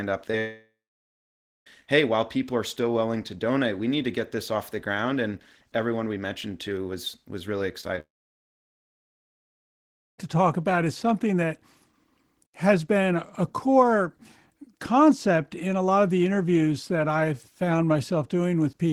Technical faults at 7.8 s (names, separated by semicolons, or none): short concealed packet loss